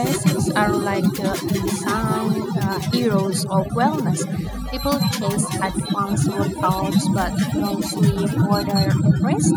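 From the start, overdone noise removal strips bands sitting near the noise estimate, leaving near-silent gaps with twinkling specks. Throughout the clip, echo with no canceller returns the talker's speech from a far-end loudspeaker, about 7 dB down and roughly a fifth of a second late, as a thinner shadow.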